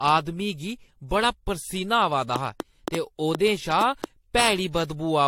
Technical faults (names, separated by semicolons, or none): generation loss; train of clicks